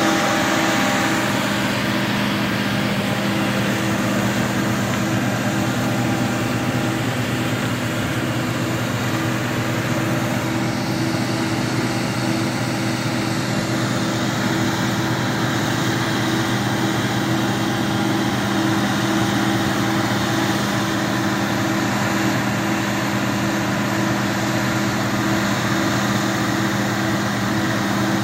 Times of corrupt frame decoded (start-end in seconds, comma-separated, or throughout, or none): 7.21-7.25, 10.10, 11.79-11.82, 13.60-13.62, 14.87-14.90, 17.35-17.38, 19.48-19.52